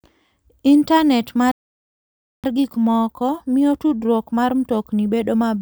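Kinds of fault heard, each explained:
Playback stall: The speech stops dead at 1.51 s and the output stays silent until 2.44 s, a gap of about 0.92 s. When sound returns, it picks up where it broke off. This points to the player likely running out of buffered data, or its output thread being held up. Nothing reached the output during that time, so the flow is simply cut.
Time-compressed catch-up: From 2.44 s to 5.44 s the speech runs fast, about 1.1 times normal speed. The pitch stays normal. The player is working through the backlog left by the stall. It trims small pieces from the audio and cross-fades the joins. The result sounds hurried.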